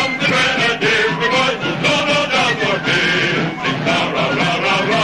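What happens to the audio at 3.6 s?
At 3.6 s the audio jumps abruptly forward, the signature of a dropped buffer, likely an overrun. Roughly 20 ms of sound never reached the recording because the hardware overwrote that block before the software read it, so the material on either side is spliced directly together with no gap. A waveform shows a sudden discontinuity there rather than a flat section, and a spectrogram shows a thin vertical broadband line.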